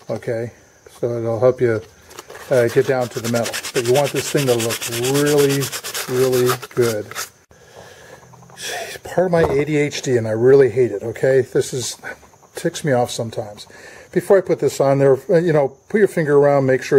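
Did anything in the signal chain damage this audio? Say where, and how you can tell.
No, nothing along the chain, from capture through playback, left an audible mark on this audio.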